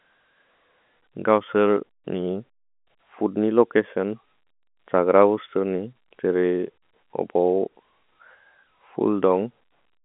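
Nothing stood out on listening to this speech, which is carried in the narrow telephone band of G.711 coding with nothing above about 3.8 kHz.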